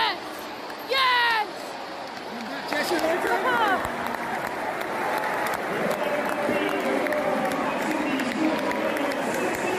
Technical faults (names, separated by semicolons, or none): none